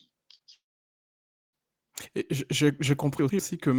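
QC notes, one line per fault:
0.35–0.41 s, short concealed packet loss: a brief smear where the sound seems stretched rather than broken. Around 40 ms of audio never arrived in time, and the receiver papered over the gap by extending the preceding sound, then crossfaded back into real signal.
0.55–1.55 s, long network dropout: the sound turns into a short fading buzz or hiss, then falls silent for roughly 0.94 s before resuming further along. This is likely a network outage of nearly a second, with the receiver's fill decaying quickly into silence.
3.19–3.39 s, chunks out of order: a jumbled, stuttering moment. A 100 ms chunk turned up one chunk late and plays after the chunk that should follow it. Nothing is lost, but the order flips and three hard edits appear.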